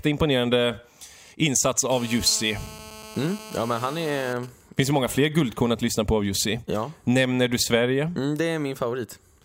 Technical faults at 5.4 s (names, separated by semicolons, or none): GSM signalling bursts